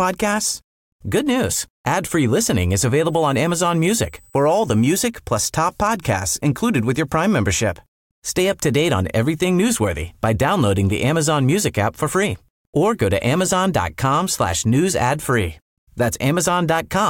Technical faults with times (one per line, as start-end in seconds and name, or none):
3.05-5.05 USB whine